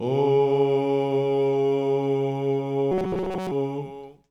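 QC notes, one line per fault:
2.92–3.51 s: robotic sound from repeated short buffers. A rigid metallic buzz at 188 Hz covers most of the sound, likely from a looped slice of about 5.3 ms.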